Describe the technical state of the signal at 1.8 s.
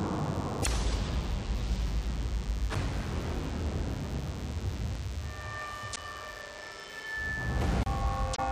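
A steady, thin 100 Hz buzz with many harmonics, some 20 dB below the sound, runs throughout: DECT cordless phone buzz, radio bursts every 10 ms rectified into the audio.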